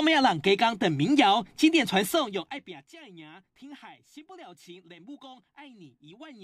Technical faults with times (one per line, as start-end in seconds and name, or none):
2.04-2.93 zipper noise